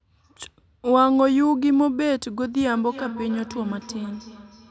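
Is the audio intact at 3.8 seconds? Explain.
No. At 3.8 s the speech is caught in a feedback echo between two devices, running from 2.72 s to the end. One device's playback re-enters the other's microphone, so each sound returns about every 300 ms, thinner and ringier, peaking about 15 dB below the speech. A spectrogram shows repeated, fading copies stacked at that spacing, with nothing above 8 kHz.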